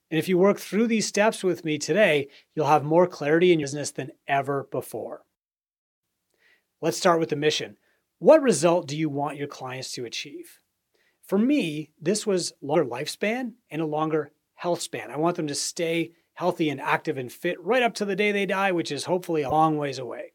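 Damaged data in the compressed stream at 3.59–3.64 s, 12.71–12.76 s and 19.48–19.52 s throws the decoder out of frame sync, producing brief glitches in the speech.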